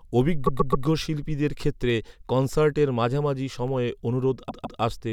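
From 0.46 to 0.85 s the speech stutters. These are repeated frames. A block of about 131 ms of compressed frames was played three extra times. The decoder simply played the same stretch again. The passage runs about 392 ms longer than it should.

Single sharp clicks follow at 1.00 s, 1.90 s and 3.68 s. The second comes just after "অভিজ্ঞ শিল্পীদের". Each is a tick with no gap in the sound. The likely cause is dropped samples, a loss of only a fraction of a millisecond. The waveform jumps straight to a later value, so the jump clicks.

From 4.48 to 4.80 s the stutter returns as repeated frames again. This time a block of about 157 ms plays twice more. The repeats add about 314 ms.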